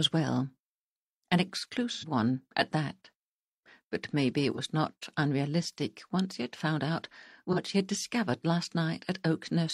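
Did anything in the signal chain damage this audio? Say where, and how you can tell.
Yes. The damage is at the codec/network stage: AAC frame loss with concealment. Three brief patches sound smeared and noisy instead of clean. They occur at 1.92–2.05 s, lasting about 85 ms, which fits two lost frames, and at 4.53–4.59 s and 7.52–7.58 s, each about 43 ms, consistent with a single frame. The decoder rebuilt each gap from the preceding good spectrum with randomised phase, which produces that washed, phasey texture before normal audio resumes.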